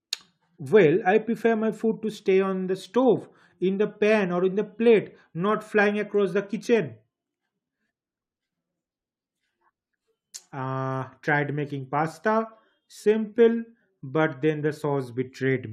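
No technical faults are audible anywhere in the speech recording.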